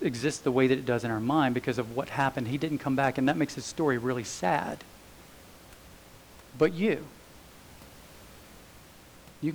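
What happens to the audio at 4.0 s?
Nothing goes wrong at 4.0 s: the speech is intact, with only the room's background noise audible, sitting about 24 dB below it.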